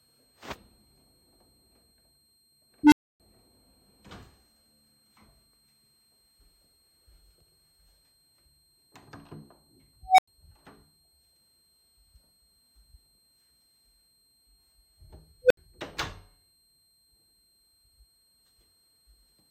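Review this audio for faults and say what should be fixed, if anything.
A thin, steady high whistle sits under the whole clip, wandering slightly between 4.17 and 4.22 kHz at roughly 15 dB below the main sound. This is a switching power supply whistle: a converter dropping into an audible burst mode, or beating against a second supply, leaks its switching tone into the audio path, and the small pitch drift follows changes in load. Prevention: use supplies that switch well above the audible band, and filter and separate their rails from the audio circuitry.

Three times a tone swells into a loud squeal and then cuts to silence. From 2.83 to 3.20 s a low tone, roughly 300 Hz, builds over 86 ms, followed by about 279 ms of silence. From 10.02 to 10.28 s a tone near 700 Hz builds over 160 ms, then goes silent for 93 ms. From 15.42 to 15.57 s a tone around 500 Hz builds over 81 ms, then goes silent for 70 ms. 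This is an unstable filter. A recursive filter loaded with bad coefficients feeds its output back with growing gain, so it clips, overflows its number range, and goes silent until it resets. Prevention: check filter coefficients for stability before applying them, and guard the filter state against overflow.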